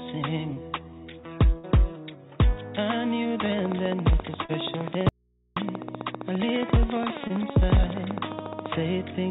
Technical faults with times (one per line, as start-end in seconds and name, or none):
1.58-1.67 burst of packet loss
3.46-8.73 train of clicks
4.46-4.51 short concealed packet loss
5.09-5.56 audio dropout to a faint residue
7.27-7.32 short concealed packet loss